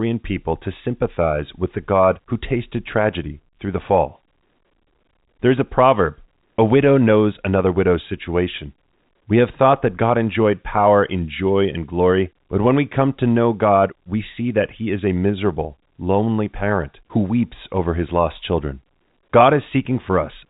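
Speech over a G.711 A-law telephone channel at 64 kbps, band-limited with nothing above 3.8 kHz as that format imposes; no technical faults found.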